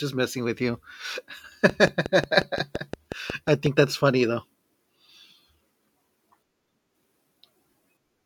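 Interference from nearby equipment or a faulty connection likely injects a train of clicks from 1.70 to 3.67 s, ending just before "that's funny though". About ten evenly spaced pulses tick at 5.6 per second, popping roughly 10 dB above the speech.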